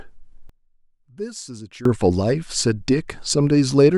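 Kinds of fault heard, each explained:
One channel inverted, 0.49 to 1.85 s: the speech drops by about 20 dB, likely because one channel's reversed polarity cancels the shared centre content.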